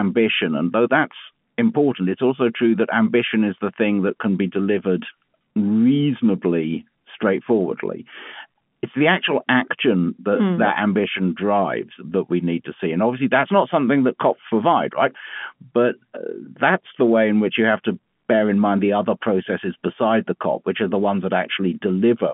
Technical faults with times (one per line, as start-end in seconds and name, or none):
none